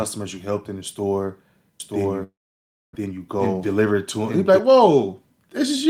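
Speech, with three overlapping faults. From 1.80 to 4.59 s there is a doubled audio track: a second, equally loud copy trails about a second behind, likely from a second capture path or an edit holding two copies. Unlike a room echo, it has no decay or reverberant colour, and it starts and stops abruptly. From 2.23 to 2.97 s comes a long network dropout, likely a burst of lost packets. A fading buzz fills 718 ms, with 610 ms of silence, and the speech resumes 600 ms further on. A plain mute would not fade, and a clean edit would leave no fill. From 3.05 to 3.93 s the jitter buffer speed-up trims roughly a tenth of a second of pitch periods, so the speech runs at 109% and sounds hurried. The pitch stays the same, unlike resampling, which would raise it.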